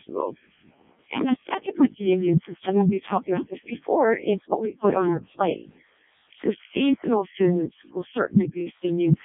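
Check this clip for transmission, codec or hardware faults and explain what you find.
One fault runs through the whole clip: the speech has passed through a Codec 2 vocoder, and the damage is heavy. Codec 2 discards the waveform, sending only pitch, voicing, energy and a coarse spectral envelope, and the decoder rebuilds the voice from sine waves. The result sounds robotic and buzzy, which fits the lowest 0.7 kbit/s mode. The band sits at roughly 150 Hz to 3.6 kHz, with nothing above 3.7 kHz.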